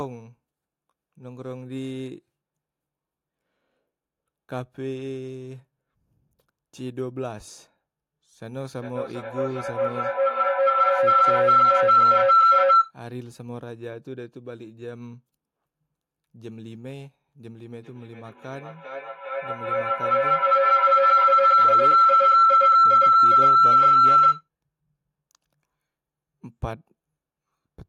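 Feedback howl appears from 8.62 to 12.98 s and again from 17.65 to 24.48 s. Each time, the loop between two devices in the same room gains level on every pass, so a tone near 1.5 kHz swells to about 16 and 17 dB above the speech, pulsing roughly every 0.4 s. Unlike an ordinary echo, it grows rather than fading.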